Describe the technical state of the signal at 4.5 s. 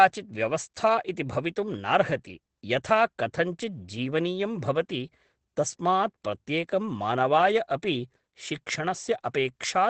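At 4.5 s the speech carries Opus voice compression, present throughout: at 12 kbps the SILK coder cuts everything above about 8.7 kHz and codes the excitation coarsely, giving a hoarse, slightly robotic edge that plain filtering wouldn't produce.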